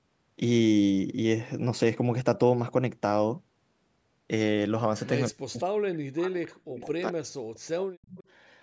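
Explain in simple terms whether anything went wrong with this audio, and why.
From 5.29 to 8.02 s the speech sinks, at its worst nearly to silence. This is speech suppressed in double talk, likely because both sides spoke at once and the echo canceller turned the talker down along with the echo.

From 8.02 to 8.24 s a faint copy of the sound comes back about 0.21 s late. This is an echo leak: likely one side's loudspeaker was picked up by its microphone, and its echo canceller did not remove all of it.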